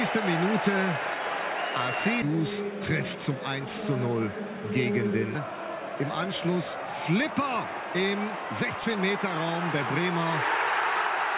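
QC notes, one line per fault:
2.22–2.36 s, skip ahead: about 0.7 s dropped and the sides spliced almost directly, so the sound lurches forward. The waveform shows an abrupt join and the spectrogram a hard vertical seam.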